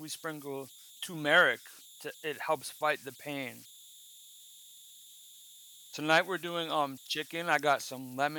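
Throughout the speech, converter idle tones appear: undithered delta-sigma patterns leave a whistle around 4 kHz, about 24 dB below the signal, plus grainy noise.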